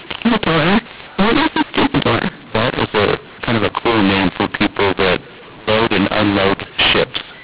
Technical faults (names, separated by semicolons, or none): mu-law and A-law mixed up